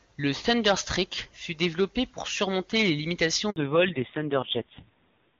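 A French speech recording carried over a phone call has a handover gap from 3.50 to 3.56 s, right after "développé pour surmonter les". The phone switched networks and no speech frames arrived for those 60 ms, so the voice drops away and that slice is lost. On the waveform it appears as a short flat stretch, and on a spectrogram as a thin vertical blank band across all frequencies. From 3.56 s to the end the call shows a fallback to narrowband: before the gap, the HD Voice (AMR-WB) link carries the high band cleanly, but afterwards nothing above 4 kHz remains and the voice turns duller and rougher, which fits a drop to a low-rate AMR narrowband codec around 5.9 kbit/s. A spectrogram shows the upper energy ending abruptly at the gap, leaving a hard ceiling at 4 kHz for the rest of the clip.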